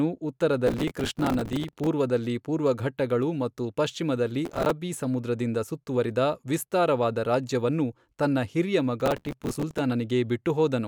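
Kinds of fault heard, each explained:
Processor overload crackle: The processor falls behind and keeps missing the deadlines for its small audio buffers, here around 5 ms each judging by the grain. Each miss replays a scrap of old audio with hard edges, so dozens of them in a row turn into gritty tearing over the speech. It happens at 0.67–1.87 s, just before "ಪೂರ್ವಘಟ್ಟಗಳು ಮತ್ತು ಪಶ್ಚಿಮದಲ್ಲಿ", briefly at 4.45–4.71 s, right before "ಸಮುದ್ರದಿಂದ ಸುತ್ತುವರಿದ ವಿಸ್ತಾರವಾದ ರಾಜ್ಯವನ್ನು", and again at 9.00–9.79 s.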